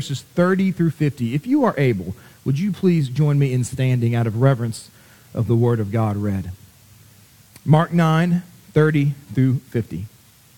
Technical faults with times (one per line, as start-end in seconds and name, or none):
0.00-10.57 low bit depth with dither